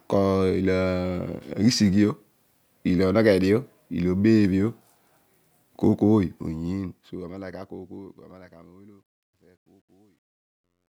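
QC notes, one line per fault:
6.13–10.94 s, truncation distortion on the fade: the fade-out from around 6 s goes grainy as it drops, since the gain stage rounds off low bits with no dither, which fits roughly 11-bit resolution. From 8.33 s to the end the grit is at its worst.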